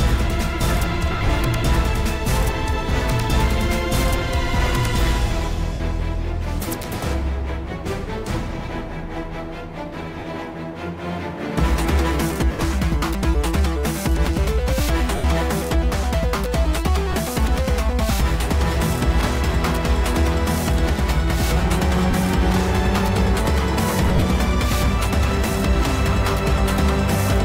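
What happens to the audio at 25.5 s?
Nothing goes wrong at 25.5 s; the audio there plays through intact, with no dropout, click, distortion or other technical fault.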